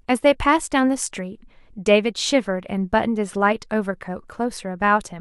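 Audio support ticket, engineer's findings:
Nothing stood out on listening to the speech; no fault found.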